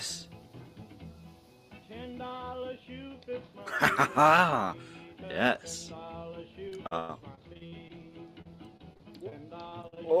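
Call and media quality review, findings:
Repeated packet loss (robotic sound) at 6.69–7.91 s, 8.41–9.33 s and 9.69–9.98 s. Choppy stretches with pieces missing. Jitter buffer or network path dropping packets in bursts, concealment extending prior audio. Gaps up to 97 ms, 36 ms and 51 ms, covering about 25%, 13% and 38% of each stretch.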